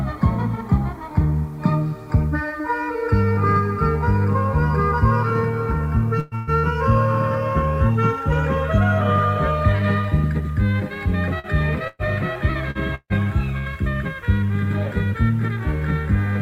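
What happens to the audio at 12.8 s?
Between 12.71 and 12.78 s there is a short concealed packet loss. About 40 ms of audio never arrived in time, so the decoder extrapolated the preceding sound and then crossfaded back, leaving a brief smear. On a spectrogram, frozen or fading partials replace fresh detail; the waveform shows repeated, decaying cycles.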